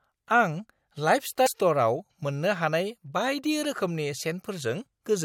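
At 1.43 to 1.48 s, about 50 ms of the speech breaks up into a chirp, squawk, click or short hole: damaged data in a compressed stream. Corrupted bytes make the decoder misread frames and hunt for the next valid header.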